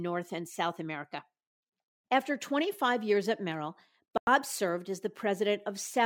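A digital broadcast dropout runs from 4.18 to 4.28 s, just before "served as". The receiver lost valid frames, a gap of about a tenth of a second that fits roughly three frames, and muted until clean data returned. The speech cuts or quickly fades to silence, and what was sent during the gap is gone.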